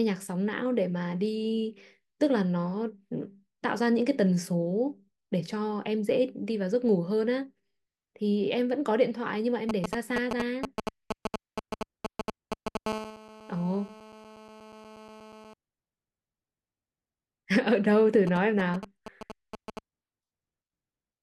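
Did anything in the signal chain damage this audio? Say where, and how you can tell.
Yes. From 9.69 to 12.77 s, and again from 18.27 to 19.79 s, there is a galloping dit-dit-dit of short buzzes, about as loud as the speech the first time and roughly 10 dB below it the second. These are GSM signalling bursts, and the damage happens in the analogue wiring. A nearby 2G phone sends short clusters of radio pulses while it handles signalling. The audio input rectifies those pulses into brief 217 Hz buzzes.

From 12.86 to 15.54 s a hard, raspy buzz runs continuously at about 15 dB below the speech. Its pitch stays at 217 Hz with a dense stack of harmonics, and it does not follow the speech at all. This is GSM phone buzz, also picked up in the analogue wiring. Here the phone is in a call and transmits its pulses steadily 217 times a second, so the rectified interference becomes a constant tone.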